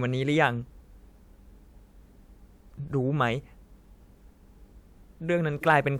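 No technical faults can be heard anywhere in the recording. There is nothing in the audio that calls for a time-stamped note.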